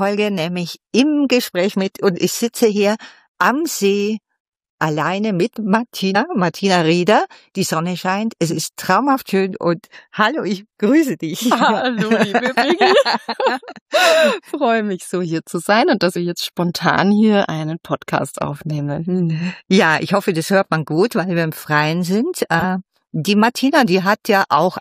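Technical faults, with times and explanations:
6.14 s, 13.32–13.34 s, 16.15 s and 22.56–22.64 s, compressed frames skipped: whole blocks of coded audio never reached playback, either missing from the stream or rejected by the decoder as corrupt, so the sound jumps forward by roughly 50, 70, 50 and 20 ms respectively. At each join a small piece of the sound is missing.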